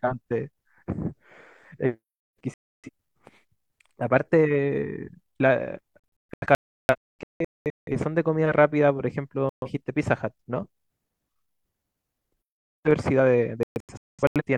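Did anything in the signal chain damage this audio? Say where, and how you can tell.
Yes, digital broadcast dropout at the reception stage. The speech mutes at 2.54–2.89, 6.19–7.92, 9.49–9.68 and 13.63–14.42 s, the longer two as scattered short holes, because the receiver silenced failed frames until good ones returned.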